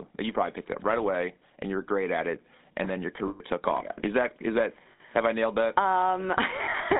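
A buzzy, gravelly roughness runs through the whole speech clip, with the sound squeezed into a telephone band of about 200 Hz to 3.7 kHz. This is the GSM full-rate codec, plainly audible, and its character fits the 13 kbps full-rate coder. It rebuilds speech from a vocal-tract model driven by evenly spaced pulses, keeping just one excitation sample in three. That coarse excitation is what makes the buzz.

Lost GSM frames cause three brief metallic, ringing holds. The first runs from 3.28 to 3.41 s, between "it and then your" and "took off is that". It lasts 120 ms, which fits six 20 ms frames. The second, from 4.92 to 5.01 s, falls between "is that is that" and "have I nailed that" and lasts 80 ms. The third is scattered across 6.64 to 6.81 s: 80 ms of loss spread over 160 ms, in short runs of a few tens of milliseconds. At each gap the decoder repeats the last good frame's settings, so the sound rings on rough and metallic.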